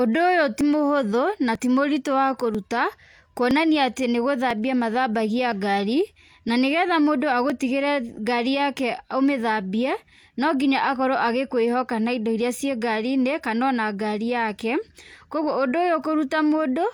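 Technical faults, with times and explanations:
0.61, 1.55, 2.55, 3.51, 4.51, 5.52, 6.49 and 7.50 s: overlap between stream segments; 18 to 39 ms of speech is trimmed at each one-second segment join, so the waveform jumps in a tiny skip.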